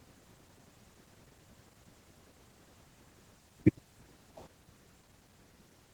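Speech clip, and the whole thing runs through Opus voice compression with plainly audible damage from start to finish. The band still reaches about 20.1 kHz, so it hasn't been narrowed, but the sound points to a low bitrate, around 16 kbps, in hybrid mode: the linear-prediction layer handles everything up to 8 kHz and a thin transform layer covers the top. That coarse excitation coding is what gives the voice its hoarse, slightly robotic edge.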